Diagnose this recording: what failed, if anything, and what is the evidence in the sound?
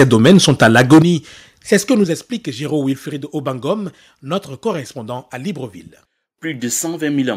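Microphone overload, likely too much gain into the converter. From 0 to 1.02 s, peaks overshoot by about 9 dB. At 1.72 s, before "ce que", it's about 2 dB. The tops are sliced off, and they crackle harshly.

Microphone volume stepped down, likely in call processing. Level drops suddenly by about 9 dB at 1.02 s. It drops again by about 6 dB at 2.04 s, after "ce que". Each step follows a clipped stretch.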